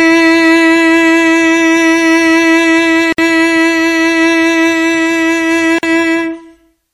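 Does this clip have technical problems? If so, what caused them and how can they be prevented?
Yes. The music drops out twice, at 3.13 s for about 58 ms and at 5.79 s for about 45 ms, then picks up exactly where it left off. That's a gap at a join of encoded pieces: each section went through the encoder on its own, so the silent start-up delay and the padded final frame were left in when they were stitched together. The codec smears the edges of the silence, so the fully silent part is shorter than the gap. To prevent it, encode the whole piece in one pass, or trim the encoder delay and padding (gapless metadata) before joining.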